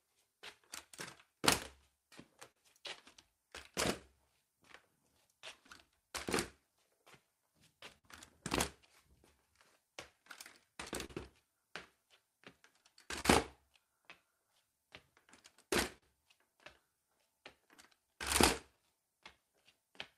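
Everyday sounds run through the whole recording with a faintly unsteady, dragging pace and small recurring hiccups, the signature of clock drift between sender and receiver. The sender's clock runs slow, by something like 4 percent, so the receiver's jitter buffer keeps draining and the playback side must keep stretching the stream to avoid running dry. The mismatch never settles, so the timing wobble persists from start to finish rather than clustering in one place.

That compensation shows up as repeated timing corrections between 0.35 s and 19.63 s. The receiver repeatedly repeats short slices of audio, playing at 98 percent speed overall and adding roughly half a second in total. The edits all lengthen the sound and are unevenly spaced, so at most they come across as slight stutters and a tempo that seems to lag and catch rather than as obvious breaks.

On top of this come scattered short gaps, heard as brief ticks and tiny smears where a moment of sound is held over. 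About seven occur between 0.32 s and 8.05 s, the longest around 50 ms. A tighter cluster of about three falls between 10.27 s and 11.10 s, each up to roughly 40 ms. About ten more, also up to about 40 ms, are spread between 13.05 s and 19.99 s. Each is a lost or late packet that the receiver patched by extending the preceding sound.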